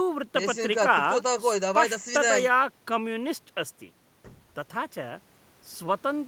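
No technical faults can be heard anywhere in this recording.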